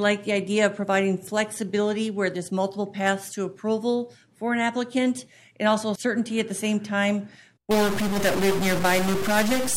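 Right at 7.71 s the sound turns harsh and buzzy, and it stays that way through to the end. That's a stuck bit, likely a broken data line or converter holding one bit fixed. Roughly half the samples get shoved by that bit's weight, a step of about -25 dBFS. Because which samples get hit follows the waveform itself, the error tracks the sound as a gritty distortion.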